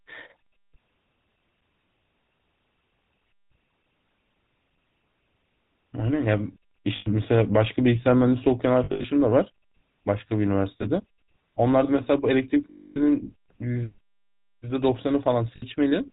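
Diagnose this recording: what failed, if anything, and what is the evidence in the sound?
The codec stage is the problem here. The whole speech clip carries a plainly audible GSM full-rate codec sound: buzzy, gravelly roughness and nothing above 4 kHz. That matches the original GSM coder, which sounds like a 13 kbps full-rate stream. It models the vocal tract and drives it with a sparse, regularly spaced pulse train, keeping only a third of the excitation samples. The coarse excitation is what makes the grit.

On top of that there are lost GSM frames, a network or transport problem. Each gap is papered over by repeating the last good frame's settings, so you hear a brief rough, metallic ring instead of a clean dropout. They're at 6.96–7.07 s (about 100 ms), 8.84–9.05 s (160 ms scattered across 200 ms, longest run roughly 70 ms), 10.82 s (20 ms), 12.70–13.22 s (260 ms, the longest) and 15.56–15.63 s (60 ms).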